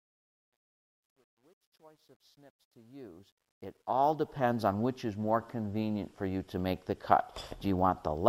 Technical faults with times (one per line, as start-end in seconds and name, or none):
0.00-4.54 truncation distortion on a fade